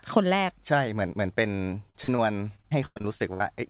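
Choppy, robotic speech breaks up from 1.56 to 2.20 s and again, worse, from 2.56 to 3.42 s, with holes up to about 100 ms long. This is repeated packet loss: each lost stretch was patched by extending the previous sound, all within narrowband audio that stops at 4 kHz.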